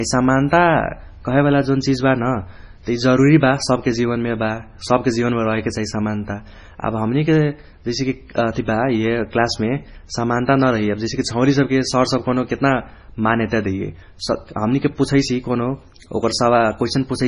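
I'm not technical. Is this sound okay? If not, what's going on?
No. The speech was likely squeezed hard by MP3 compression, so everything above 10.5 kHz is gone, leaving it dull, watery and swirly from start to finish.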